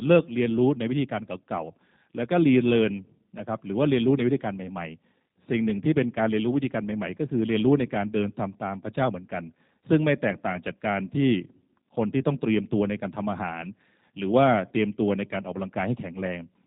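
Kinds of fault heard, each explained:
G.729 codec: the speech is rebuilt from a vocal tract filter, a pitch predictor and sparse pulses, which fits an 8 kbit/s coder. It sounds plainly rough and synthetic. A spectrogram shows a hard ceiling near 3.8 kHz with nothing above it.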